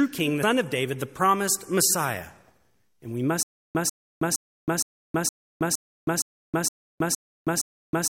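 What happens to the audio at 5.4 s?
At 5.4 s the speech is caught in a stutter with silent gaps, lasting from 3.43 s to the end. A 0.14 s fragment repeats every 0.46 s with 0.32 s of digital silence between, likely from a stalled stream. On a waveform this appears as identical short blocks separated by flat lines.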